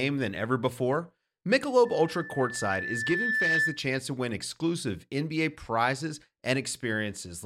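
From 1.85 s to 3.89 s, a loudspeaker feedback squeal rises under the speech: a single tone near 1.8 kHz swells over roughly a second and a half until it sits a few decibels above the voice, then stops just before "to win exclusive". A microphone picked up its own loudspeaker, and at that frequency the loop gain passed unity. Unlike a steady interfering tone or hum, it starts faint and grows by itself.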